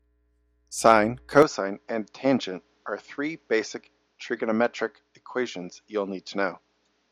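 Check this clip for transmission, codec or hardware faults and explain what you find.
One fault is present: an input switched to a poorer device, from 1.42 s to the end of the speech clip. The change is most likely the system moving to another microphone or a headset's call profile, which passes a narrower band. With no silence at the switch, the sound turns abruptly duller and about 5 dB quieter, with a faint new noise floor roughly 45 dB down. A spectrogram shows energy above 7.2 kHz cut off sharply from that point; the waveform's envelope steps down.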